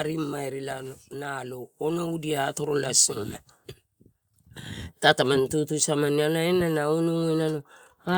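From 0.05 to 1.07 s, automatic gain falling pulls the level down by about 5 dB: the gain control judged the opening input too loud or too noisy and eased back, so voice and background sink together, unlike a fade in the speaker's own delivery.

Then, from 1.09 to 3.44 s, automatic gain rising overcorrects, lifting the level by about 10 dB over more than two seconds. Because the background noise swells along with the speech, this is a gain change in the chain rather than the speaker growing louder.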